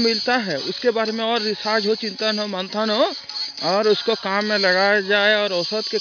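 No technical fault can be heard anywhere in the audio, and the signal stays steady and intact throughout.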